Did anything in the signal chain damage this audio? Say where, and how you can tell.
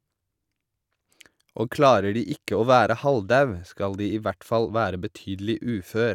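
No, no damage is audible.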